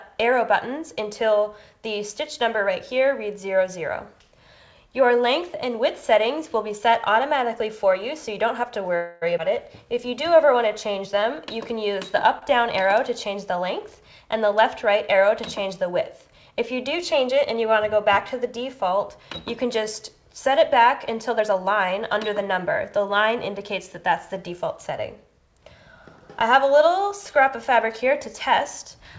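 From 8.96 to 9.24 s comes a call audio freeze: the last sound continues as a fading buzz for about 256 ms, likely because delayed packets left the jitter buffer empty. On a spectrogram the final frame's harmonics smear sideways into a blurred, decaying band. The audio then resumes where it stopped.

At 9.38 to 9.40 s a skip ahead drops roughly a tenth of a second, joined by only a 9 ms fill. The waveform shows an abrupt discontinuity where the envelope jumps. The spectrogram shows a sharp vertical seam between mismatched patterns.

Between 9.85 and 11.21 s a jitter buffer slow-down plays the sound at 92% speed with unchanged pitch, adding 122 ms by repeating single pitch periods. Sounds drag. The waveform shows identical cycles recurring, and spectrogram harmonics stretch horizontally.

At 12.39 to 12.43 s a short stall from a late packet holds the current sound for 27 ms before continuing, with nothing lost. 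It gives a brief buzzy sustain. On the waveform a few repeated cycles appear, and the spectrogram shows a short, flat, slightly dimmed strip.

From 21.30 to 25.01 s a jitter buffer speed-up runs the audio at 107% with the pitch intact, trimming around 0.3 s in total. It feels hurried. The waveform shows tiny splices where pitch periods were removed, and spectral events crowd closer together in time.

Throughout, the G.722 call path leaves nothing above 8 kHz, a clean ceiling on the spectrogram.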